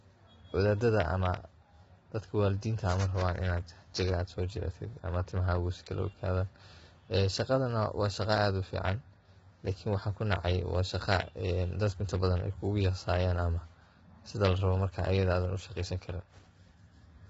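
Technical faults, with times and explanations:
Throughout, low-delay AAC compression: the speech sounds heavily rough and grainy, with noise between pitch harmonics and nothing above 7.8 kHz. This is likely AAC-ELD's short frames resolving harmonics poorly on too few bits, which fits a bitrate near 16 kbps.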